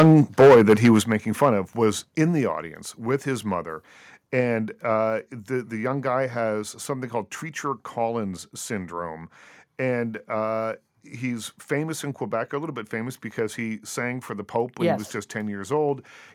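From the start to 0.98 s the speech has a harsh, crackling edge, with the loudest syllables sounding flattened and buzzy. This is microphone overload: the peaks are driven about 10 dB past the converter's ceiling, so their tops are sheared off, and around a tenth of the samples in this stretch sit pinned at the limit. The likely cause is a microphone input volume set too high.

At 1.02 s the speech and the background both drop abruptly by about 7 dB in a single step, with no fade. This is the microphone volume being stepped down, most likely by the call software reacting to the clipped peaks just before it and cutting the device's input volume all at once.

A brief return of the same crackle follows from 1.43 to 1.49 s, just before "of was in the". This second microphone overload is milder. The peaks exceed the limit by about 3 dB and only a small share of samples is cut off. The likely reason is that the reduced input volume still leaves too little headroom for the loudest moments.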